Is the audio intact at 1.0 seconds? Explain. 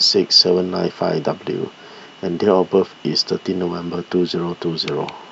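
Yes, the audio is intact at 1.0 seconds, with no fault present at that point in the speech.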